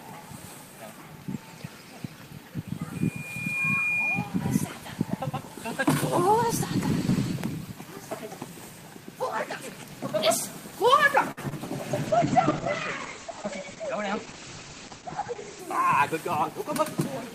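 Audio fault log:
11.31–11.39 s, short stall from a late packet: a packet arrived late and the jitter buffer ran dry, so the receiver stretched the last sound for 58 ms, then resumed where it stopped. Nothing is lost, but the sound hangs with a faint buzz or dip.
11.49–11.53 s, short concealed packet loss: about 20 ms of audio never reached the decoder in time. The receiver covered the gap by extending the preceding sound for 17 ms and then blending back into the real signal, leaving a brief smear or wobble.
12.08–15.67 s, call bitrate drop: the bandwidth estimate fell and the encoder was pushed to far fewer bits. The sound fits a fall from around 32 kbps to 10 kbps, with the top end cut to about 8 kHz, so the audio turns muffled and rough for roughly three and a half seconds.
14.13–14.74 s, jitter buffer speed-up: the buffer was holding more audio than its target, so the receiver trimmed short pitch-period pieces repeatedly, about a twentieth of a second in total. 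Playback runs at 107% speed with unchanged pitch and sounds hurried.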